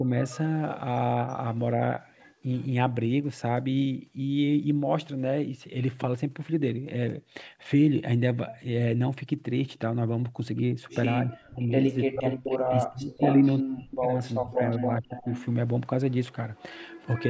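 At 0.0 s the speech briefly dips by around 10 dB. This is likely speech suppressed in double talk, where the echo canceller turns the talker down while the far side is also speaking.

From 0.26 to 0.37 s a faint copy trails about 283 ms behind, well below the speech. This is likely an echo leak, where loudspeaker sound the canceller missed is sent back. A much fainter copy returns from 2.18 to 2.66 s, 337 ms late.

The speech is cut almost out from 11.23 to 11.75 s, and cut out in pieces from 12.08 to 15.28 s, again likely from double-talk suppression.

Meanwhile a strong echo 399 ms late, nearly as loud as the speech, runs from 12.27 to 12.75 s and from 13.21 to 15.45 s. This is likely further echo leak. A weaker 399 ms echo runs from 16.32 s to the end.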